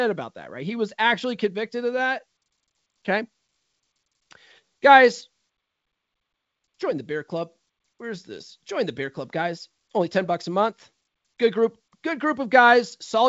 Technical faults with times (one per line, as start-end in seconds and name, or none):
none